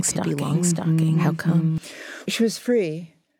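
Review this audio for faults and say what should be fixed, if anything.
A doubled audio track runs from the start to 1.78 s. A full-band copy about 0.7 s behind and roughly 5 dB quieter cuts off abruptly, with no decay, unlike room echo. It is likely a second, slower capture path or an edit leaving two copies. Fix it by disabling the duplicate route or removing the offset copy.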